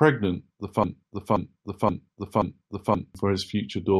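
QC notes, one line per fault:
0.84 to 3.15 s, broken-record loop. A fragment of the speech about 527 ms long plays back to back, four times over, with no gap or change between passes. The repeats are exact copies, so the sound stutters mechanically instead of moving forward. The speech that belonged in those two-plus seconds never arrives. The likely cause is a stall in the player, encoder or stream, which kept resending the last chunk it held until playback recovered.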